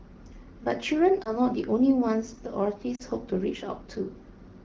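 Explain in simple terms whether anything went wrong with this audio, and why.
Lost AMR speech frames cause two brief glitches, at 1.23 to 1.36 seconds and 2.95 to 3.02 seconds. Radio errors spoiled tiny slices of speech, so the phone's decoder filled each gap by repeating the last good sound more quietly. That produces a short dip or warble at the first glitch and a drop to near silence at the second, before the speech recovers.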